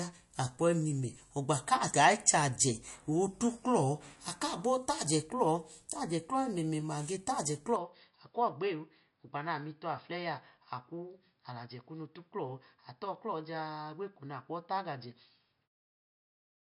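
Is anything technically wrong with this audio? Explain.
Yes, there are two faults.

Throughout the speech there is plainly audible MP3 compression, likely the cause of the watery, swirling texture and the empty band above 11.3 kHz. Short of bits, the encoder drops weak frequency lines frame by frame, which fits a low bitrate around 48 kbps. Unlike a band limit from a device, the damage flickers in time rather than simply dulling the sound.

From 7.76 s to the end, the input switched to a poorer device, likely the cause of a sudden step down in bandwidth to nothing above 5.2 kHz. The speech turns duller and boxier and about 5 dB quieter, with its own low noise floor well beneath it. There is no gap at the switch, and the change is a step rather than a gradual fade like the one that closes the clip from about 15.5 s to 15.69 s.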